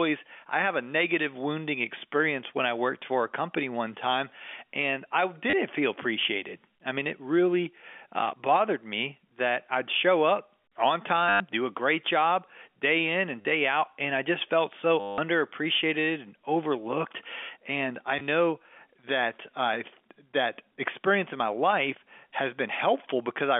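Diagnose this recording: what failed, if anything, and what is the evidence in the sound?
Network stage: packet loss with last packet repeated, at 5.50–5.53, 11.29–11.40, 13.41–13.45, 15.00–15.18 and 18.19–18.21 s. The receiver replays the last good packet. The longer runs buzz near 100 Hz, which fits 10 ms packets.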